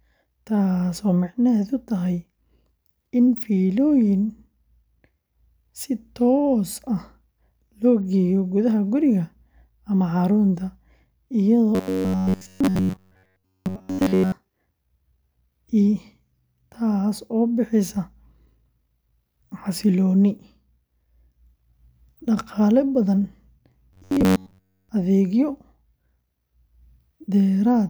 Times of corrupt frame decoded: none

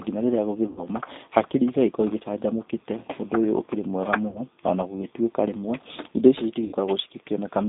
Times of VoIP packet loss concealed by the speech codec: 0.67-0.87, 4.28-4.41, 6.65-6.76

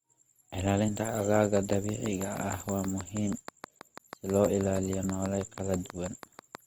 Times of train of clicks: 1.57-6.56

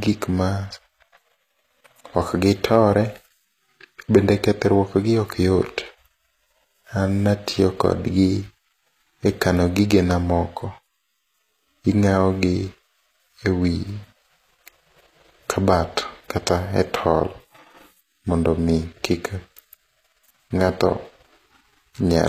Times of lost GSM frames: none

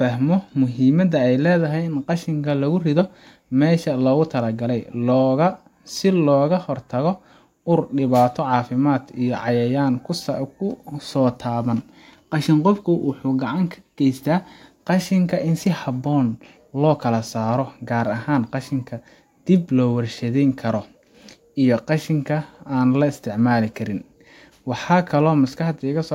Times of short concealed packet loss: none

